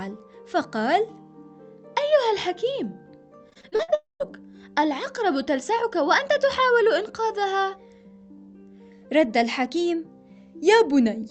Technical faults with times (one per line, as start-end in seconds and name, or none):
3.49-4.24 repeated packet loss (robotic sound)
3.95-4.28 long network dropout